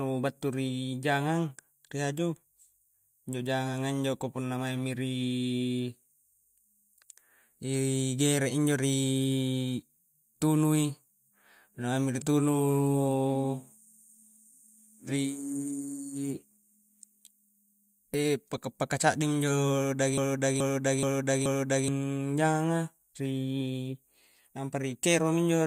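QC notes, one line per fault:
20.18 to 21.88 s, broken-record loop: a 427 ms fragment of the speech plays four times back to back, each copy identical and undiminished, unlike a decaying echo, and the speech due in that span is lost; likely a stalled stream resending its last fragment.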